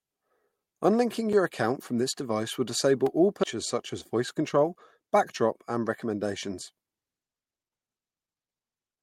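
At 1.33 s the playback path likely failed to deliver a block of samples in time and zeros went out instead. This block of digital silence lasts about 7.5 ms, so it is heard as a tick rather than a hole. At 3.06 s, just after "this device will disable", a second, shorter block of about 2 ms produces a tick.

From 3.43 to 3.45 s a skip ahead happens. After "device will disable all", roughly a second of audio was discarded while later audio was already queued. Playback jumps straight to "such as" with no fill, so the join is abrupt and something is audibly missing.

From 4.15 to 4.76 s, between "such as" and "backdrop and recommendations", a jitter buffer speed-up occurs. The buffer held more audio than its target, so the receiver trimmed short pitch-period pieces, around 50 ms in total. The speech runs about 7% fast with its pitch unchanged and sounds slightly hurried.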